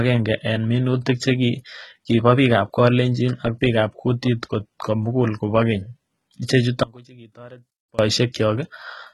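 From the start, the speech has a gritty, metallic treble, with s sounds turning lispy and nothing at all above 11.8 kHz. That points to heavy HE-AAC compression at a very low bitrate, likely around 16 kbps, with the upper band rebuilt from copied lower harmonics rather than coded.

At 6.83 s the speech cuts out abruptly and comes back at 7.99 s. For about 1.15 s only a faint leak remains, roughly 25 dB below normal. This is an audio dropout to a faint residue: the signal was likely lost while the path stayed live.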